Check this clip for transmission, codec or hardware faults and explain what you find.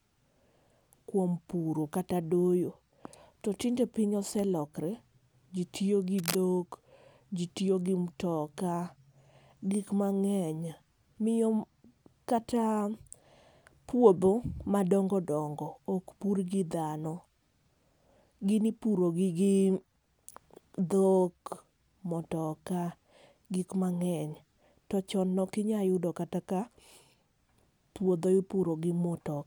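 One hardware fault stands out: a burst of cable scratch noise from 6.18 to 6.35 s, lasting about 170 ms. Dense, ragged crackle sits over the speech there. It runs only slightly quieter than the speech itself. The likely cause is a worn cable or connector being moved. Its contact resistance then shifts rapidly, and that shifting is what injects the uneven bursts.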